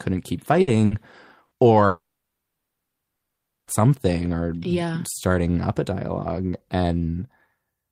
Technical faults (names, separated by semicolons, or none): burst of packet loss; long network dropout